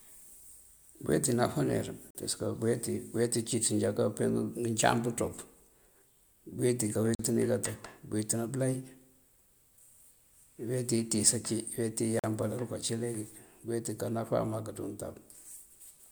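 At 2.11, 7.15 and 12.19 s the speech drops into a hard-edged 44 ms hole, a gap between chunks. The audio arrives in 5-second pieces and silence gets inserted at each join, so nothing's missing but the flow stutters at a steady rhythm.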